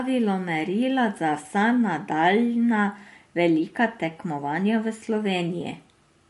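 Throughout the speech, the likely cause is MP3 compression at a starved bitrate, roughly what a 48 kbps encode would give. The encoder discards everything above 11.3 kHz, dulling s sounds, and drops weak spectral detail frame by frame, leaving a plainly audible watery, swirling texture.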